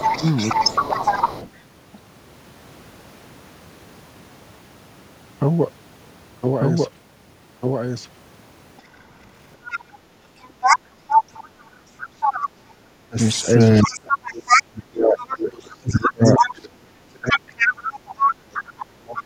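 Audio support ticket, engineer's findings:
Doubled audio track, whole clip. Full-band second copy about one second behind, at roughly equal level, dry, no room colour. Likely a second capture path or misaligned edit. Waveform shows each burst repeated a second later; spectrogram shows identical patterns shifted in time.

Speech suppressed in double talk, 0.0–1.23 s and 11.09 s to end. Talker's level dips in pieces, about 15 dB at the start and up to about 35 dB later, affecting roughly seven seconds of the later span. Likely the echo canceller clamping both sides while the far end talks. Appears as envelope holes and high-band gaps.

Other side's voice leaking through, 0.0–1.5 s, 8.78–11.16 s and 13.36–19.21 s. Second voice audible, about 5 dB under the talker in the first and last spans, near equal level at 8.78–11.16 s. Likely loudspeaker echo left uncancelled. Spectrogram shows overlapping, unrelated harmonic tracks.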